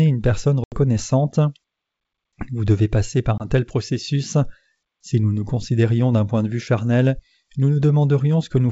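Speech over a wideband G.722 line shows packet loss on the ADPCM call at 0.64–0.76 s (80 ms lost, fitting several packets) and 3.38–3.44 s (20 ms, about one packet). Each appears as a square-edged silent gap and a blank vertical band, followed by slightly distorted speech while the decoder's predictor resynchronises.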